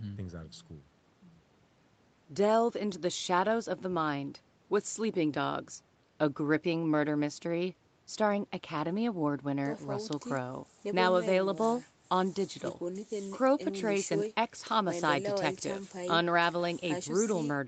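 No technical faults can be heard in the speech.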